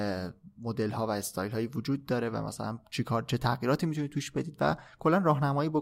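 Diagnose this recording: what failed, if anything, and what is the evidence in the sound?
Nothing failed here: the speech comes through without any dropout, click, distortion or timing glitch, so there's nothing in the sound to point at any stage of the chain.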